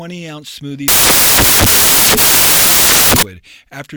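Samples built from the wrong bytes, from 0.88 s to 3.23 s: across this stretch the speech is replaced by loud, harsh broadband noise, close to white on the louder sounds. The reader is assembling each sample from mismatched bytes, whether shifted by one, swapped in order or misaligned, so the rapidly fluctuating low-order bits land in the most significant position. The result swamps the signal.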